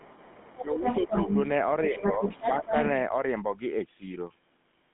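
A buzzy, gravelly roughness runs through the whole clip, and nothing is heard above about 3.8 kHz. The line band sits between roughly 150 Hz and 3.6 kHz. This is the GSM full-rate codec. It rebuilds speech from a vocal-tract model driven by a sparse, evenly spaced pulse train. That coarse excitation is what grinds the voice, and the damage is plainly audible. The sound fits a 13 kbit/s GSM full-rate link.

From 0.00 to 0.65 s a faint second voice sits underneath, about 20 dB below the main talker. It returns from 0.83 to 1.34 s and again from 1.94 to 3.05 s, this time at about the same level as the speech. This is the other side's voice leaking through. The far end's audio, played from the talker's loudspeaker, was likely picked up by the microphone and not fully cancelled.

Overlapping those stretches, the main voice sinks and thins. From 0.59 to 1.36 s it drops by about 10 dB over roughly half a second in total. 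From 1.84 to 2.21 s it dips by about 5 dB for some 300 ms. Around 2.60 to 2.74 s there is a brief dip of about 10 dB. This is speech suppressed in double talk. With both sides talking at once, the echo canceller likely could not tell the talker from the echo and turned everything down.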